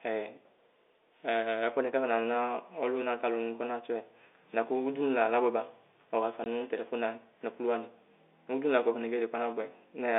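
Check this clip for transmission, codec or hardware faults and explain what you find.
One transmission fault stands out. From 6.44 to 6.46 s the speech drops into a sudden 20 ms hole of dead silence. This is packet loss filled with silence: lost packets, likely two of 10 ms each, were replaced by nothing. The G.711 telephone coding sounds as expected, holding the speech to a narrow 300 Hz to 3.6 kHz line band.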